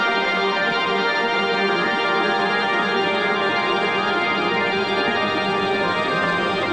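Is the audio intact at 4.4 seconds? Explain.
Yes, the audio is intact at 4.4 seconds, with nothing at that moment that breaks up, drops out or distorts.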